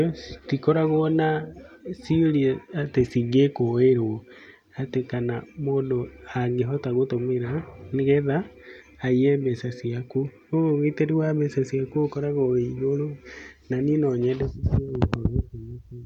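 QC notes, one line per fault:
No fault to note.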